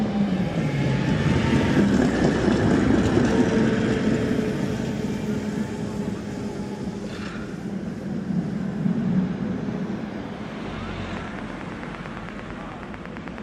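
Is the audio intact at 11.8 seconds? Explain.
No, a train of clicks runs from 11.17 to 13.39 s: about twenty regular ticks, roughly nine per second and about 10 dB above the audio. They likely come from electrical interference or a faulty connection or power supply. They appear as evenly spaced spikes in the waveform and thin vertical broadband lines on a spectrogram.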